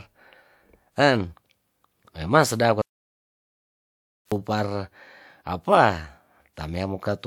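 Speech recording with one audio dropout to silence: the input was likely lost through a disconnected device, a failed link or a stray mute, so from 2.82 to 4.32 s the speech cuts out into dead silence with no room tone, and 1.5 s of it is gone.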